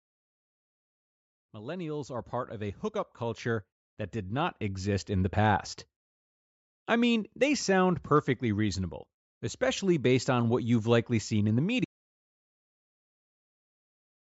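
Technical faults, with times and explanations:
1.52 to 5.42 s, automatic gain rising: the automatic gain control judged the input too quiet and raised its gain gradually, by about 14 dB over nearly four seconds, so speech and background noise swell together instead of the speech alone growing louder.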